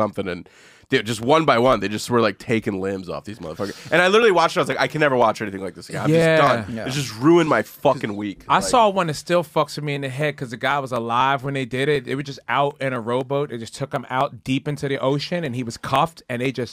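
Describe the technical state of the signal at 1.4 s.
At 1.4 s you're inside a run of periodic USB or driver dropouts that goes from about 0.23 s to 16.46 s. Something is stalling the audio path every 0.25 s, and each time roughly half a millisecond of audio simply gets skipped, not padded with silence. That splice makes a tick, so you hear a steady four-per-second ticking that rides along with the signal, around seventy of them across the span.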